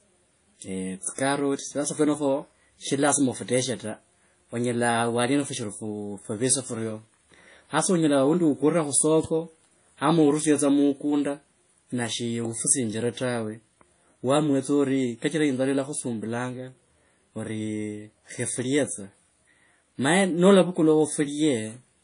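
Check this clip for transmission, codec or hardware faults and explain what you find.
One codec fault runs through the whole speech clip: WMA compression, likely from low-bitrate encoding near 32 kbps, leaving ringing, washy smearing, signal-following hiss and nothing above 10.1 kHz. Unlike a plain low-pass, the noise breathes with the signal.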